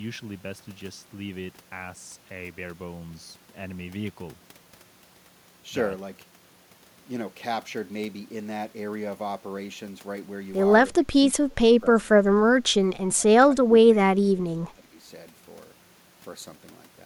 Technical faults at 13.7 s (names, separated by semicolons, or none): speech suppressed in double talk